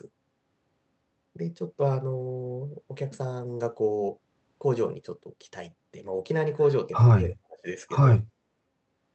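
From 7.22 to 7.68 s the speech sinks sharply, by roughly 35 dB at its lowest. This is speech suppressed in double talk, likely caused by an echo canceller that could not tell the near talker from loudspeaker echo while both sides spoke, so it pushed everything down. The drop lasts about half a second.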